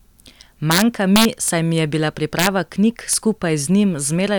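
A speech clip with integer overflow in three places: from 0.71 to 1.48 s, from 2.39 to 2.47 s, and briefly at 3.13 s. The gain is pushed about 3, 4 and 1 dB past full scale, and instead of being held at the limit, each peak wraps around to the opposite extreme. That produces violent cracks, far harsher than clipping, which only flattens peaks into a buzzy rasp without flipping polarity.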